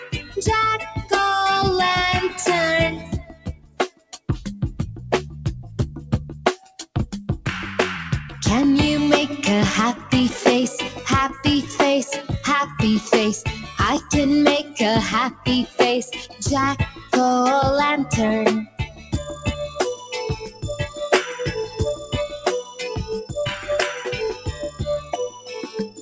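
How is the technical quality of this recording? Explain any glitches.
The recording has two related faults, both caused by a speech noise suppressor, and the audio also carries a call-codec band limit with nothing above 8 kHz, which fits G.722 at 64 kbps.

Noise suppressor applied to music or sounds, throughout: a suppressor built for speech reads steady tones, ambience and reverb as noise and lowers them. Level swings by around 10 dB, so sustained parts and tails sink while attacks pass, giving pumping and thinning.

Sound cut by the noise suppressor, at 0.0 to 1.12 s, 2.29 to 4.29 s, 5.64 to 6.96 s, 9.97 to 17.13 s, and 18.65 s to the end: the suppressor pulled these passages down further, by about 12, 19, 13, 14 and 17 dB at their deepest. Held and decaying sound drops or is cut short.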